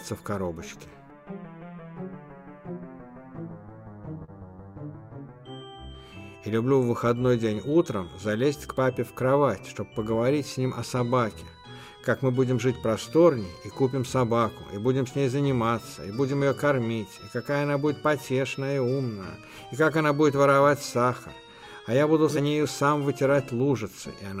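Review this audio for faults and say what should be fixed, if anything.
A short stall from a late packet occurs at 4.24 to 4.30 s: the packet arrived late, the jitter buffer ran dry, and the receiver stretched the last sound for 38 ms before resuming at the same point. Nothing is lost, but the sound is briefly held, with a slight buzz or dip, and playback runs 38 ms later afterwards. A jitter buffer with a little more headroom, or one that adapts to network delay, would prevent it.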